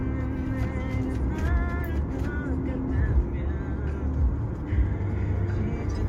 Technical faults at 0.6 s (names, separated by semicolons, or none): none